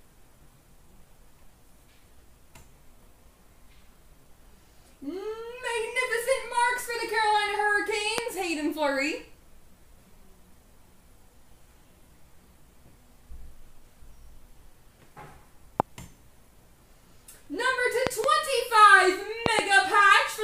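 Loud pops hit at 8.18–8.20 s and 15.80–15.82 s, then as double pops at 18.07–18.26 s and 19.46–19.61 s. They are sharp thumps roughly 20 dB above the sound, which continues underneath rather than dropping out. They were likely caused by voltage spikes from a plug, switch or static.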